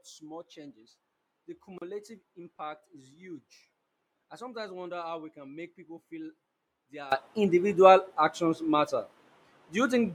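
One channel inverted, from 0.0 to 7.12 s of this speech recording: summed to mono, the sound drops by about 21 dB, because the material common to both channels cancels. A polarity flip on one side is the likely cause, leaving only the inter-channel difference. A gap at a join of encoded pieces occurs at 1.78–1.82 s, a 35 ms gap with smeared edges, after which the sound resumes where it stopped. Separately encoded pieces, about 10 s apart, were joined without trimming the encoder's start delay and end padding.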